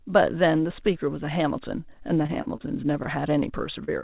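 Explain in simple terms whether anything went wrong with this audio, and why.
Two things went wrong, both from audio data arriving too late over a call connection whose sound stops at 4 kHz. From 2.14 to 3.06 s there is repeated packet loss (robotic sound): nine separate gaps, the longest 43 ms, each patched by stretching the preceding sound. About a sixth of that stretch is filled-in audio, so it comes across as choppy.

At 3.84 to 3.90 s there is a short concealed packet loss. About 20 ms of audio never arrived, and the receiver covered it by extending the sound just before, then blending back in, leaving a brief smear or wobble.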